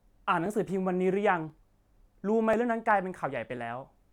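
Speech clip. Regular clicks sound from 0.46 s to 3.57 s, about four in all, spaced 1.03 s apart. The likely cause is clock drift buffer slips. Two clocks disagree by roughly 700 ppm, so the buffer drops or repeats about 30 samples each period.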